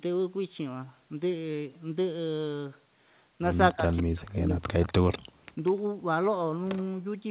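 A speech recording carried over a call, with content stopping near 4 kHz as the narrowband path implies. From 3.73 to 4.93 s the speech is suppressed in double talk, likely because the echo canceller mistook it for echo while both sides spoke. About a second of it dips, by up to roughly 40 dB, visible as a hollowed waveform and faded spectrogram energy. Two short echo leaks, at 5.12 to 5.19 s and 5.66 to 5.72 s, repeat the voice 193 ms late, likely residual loudspeaker pickup. They sit about 15 dB and about 30 dB below the speech, as delayed copies of earlier harmonics. The background is gated by the echo canceller at 5.23 to 5.27 s, a 40 ms drop of about 38 dB that shows as a thin vertical gap in the noise floor.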